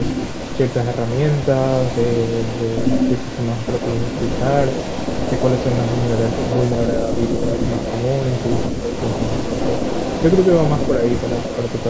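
From the start to 7.02 s a delayed copy of the speech trails the talker by 133 ms, sitting roughly 10 dB below it. This is an echo leak. The likely cause is a far end playing the call on a loudspeaker whose echo canceller failed to strip what its microphone picked up and returned it down the line. The same echo resumes at 7.19 s and runs to the end of the clip, with the same delay and level.

Between 6.96 and 7.52 s, the talker's level sags by around 5 dB in patches totalling about 400 ms. A shorter dip of about 150 ms follows between 8.69 and 8.96 s. This is speech suppressed in double talk. It likely arose because both sides were speaking at once, and the echo canceller, unable to separate the talker from the loudspeaker echo, turned both down. The band-limiting from call microphone processing, with nothing above 8 kHz, is normal and not a fault.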